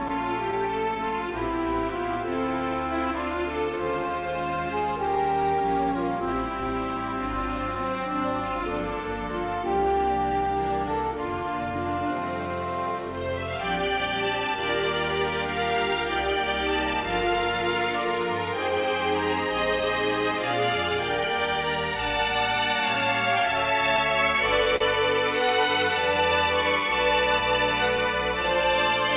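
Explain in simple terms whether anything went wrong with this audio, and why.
Several timing problems can be heard. The sound also passed through a phone-style call codec, which removes everything above 4 kHz and makes it sound narrow and muffled.

The first problem is clock drift between sender and receiver. Each end keeps time with its own clock. Here the sending clock runs a few percent slow. The receiver keeps getting sound a little later than it expects. It has to keep adjusting to stay in step. This goes on for the whole clip.

Those adjustments are the repeated timing corrections. From 1.00 to 23.47 s, the receiver keeps padding the sound with tiny repeated pieces. Playback runs at about 97% speed there, which adds roughly half a second in total. From 25.69 s to the end, it happens again at 98% speed and adds about a tenth of a second. Each fix is small and unevenly spaced.

There is also a short stall from a late packet at 24.76 s. 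A piece of audio did not arrive on time, and the receiver had nothing new to play. It held the last bit of sound for 42 ms until the piece arrived. Then it carried on from the same place. Nothing is lost. You may hear a brief hold, with a slight buzz or dip.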